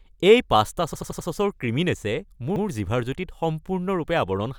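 In this speech clip, new audio twice failed to reach the output device in time, so it played its last buffer again, a repeated buffer fault. From 0.94 to 1.28 s one piece about 85 ms long, which fits a 4096-sample buffer, sounds four extra times as a stutter with a hard join at each repeat. At 2.56 to 2.65 s the same happens once. Essentially no audio is lost.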